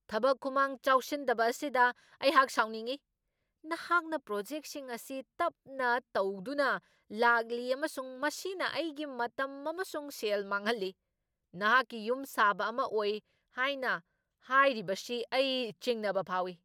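Speech recording, with no technical faults to report anywhere in it.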